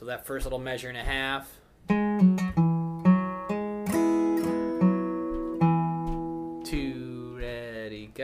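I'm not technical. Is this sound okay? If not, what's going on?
Yes, no faults can be heard.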